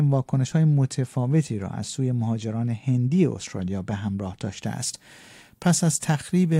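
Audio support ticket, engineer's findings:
Speech turns thin, bright and sibilant from 4.66 s to the end at 6.59 s; treble sits about 10 dB high at 10 kHz relative to 1 kHz. Pre-emphasis left on: shelf shape fits a 50 µs FM emphasis curve, treble boost applied upstream for transmission, matching de-emphasis cut never applied at the receiver or decoder stage. Fix: apply 50 µs de-emphasis from 4.66 s onward.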